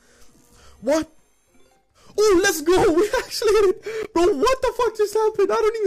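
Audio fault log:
4.03–4.07 s, Bluetooth stall: the sound drops out for about 15 ms of silence and then resumes, likely because delayed wireless packets let the playback buffer run empty. On a spectrogram it appears as a narrow blank vertical gap across all frequencies, and on the waveform as a short flat line.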